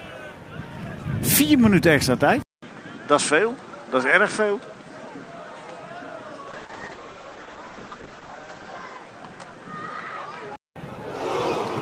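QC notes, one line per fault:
2.42–10.76 s, input switched to a poorer device: after a 200 ms silence at 2.42 s the sound turns duller, with nothing above 9.1 kHz and a new noise floor about 30 dB below the signal, at an unchanged level. This most likely comes from the input moving to a narrower-band microphone or headset.
6.49–9.05 s, call bitrate drop: the encoder rate falls from 32 to 11 kbps for about 2.5 s, and the coded bandwidth narrows from 20 kHz to 8 kHz. The coarser coding makes the sound rough and muffled until the bitrate recovers.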